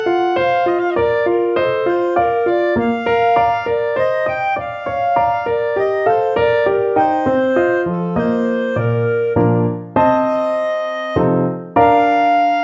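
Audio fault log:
No fault can be heard anywhere in the clip. Nothing in the audio calls for an entry in this log.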